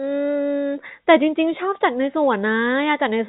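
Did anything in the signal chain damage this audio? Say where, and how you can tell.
No, nothing in the chain damaged it: the speech reaches the listener through a working call path, and the absence of any content above 4 kHz is the normal narrowband limit, consistent with a 64 kbps G.711 mu-law codec.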